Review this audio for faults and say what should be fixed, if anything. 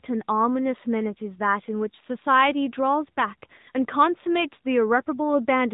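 AMR narrowband mobile codec damage runs throughout: nothing passes above 3.8 kHz, and the speech has a buzzy, synthetic edge from the vocal-tract model and sparse pulse excitation, pointing to a mid-rate mode near 10 kbps. A plain low-pass filter would dull the sound without that coded buzz. Capture or transfer the audio over a wideband path rather than a narrowband mobile call.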